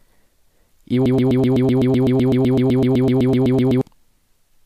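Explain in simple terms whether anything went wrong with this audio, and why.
Broken-record loop, 1.06 to 3.81 s: one 0.13-second speech snippet repeats 22 times, likely from a stalled stream, replacing the speech that belonged there.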